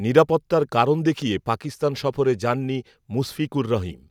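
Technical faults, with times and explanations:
Nothing technical goes wrong anywhere in this bit of speech, so there's nothing to list here.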